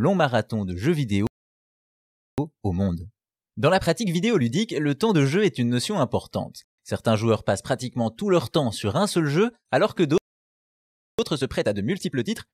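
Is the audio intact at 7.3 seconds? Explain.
Yes, the speech plays through cleanly at 7.3 seconds, with no audible fault at that point.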